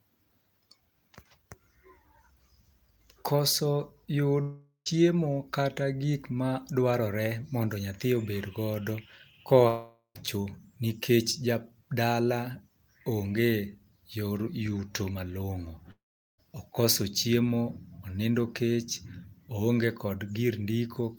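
Speech that three times trails into a fading buzz and then silence, at 4.41–4.88 s, 9.68–10.17 s and 15.91–16.40 s, before resuming with material missing, likely a long network dropout.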